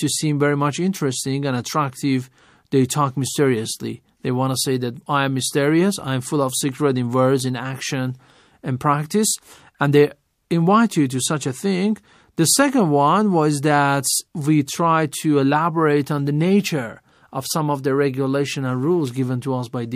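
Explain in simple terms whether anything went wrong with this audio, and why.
Just before a sharp attack at about 14.66 s there's a brief hiss, pre-echo. The codec chops audio into blocks of roughly 36 ms and never switched to shorter ones, so noise meant for the loud attack leaked about 18 ms ahead, blurring its edge.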